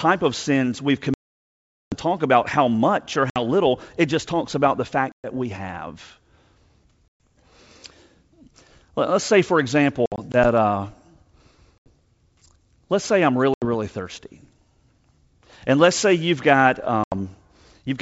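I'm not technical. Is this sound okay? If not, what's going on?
No. This speech call has packet loss on an ADPCM call: chunks of the signal went missing in transit and were replaced by silence. The worst gap comes right after "of sins we've", from 1.14 to 1.95 s. Shorter holes follow at 3.30, 5.12, 7.09, 10.06 to 10.36 (several small breaks), 11.78, 13.54 and 17.04 s. Unlike an ordinary dropout, the speech doesn't come back cleanly. The receiving end has lost track of the sender, so it returns with a click, a jump in loudness or a brief roughness before settling.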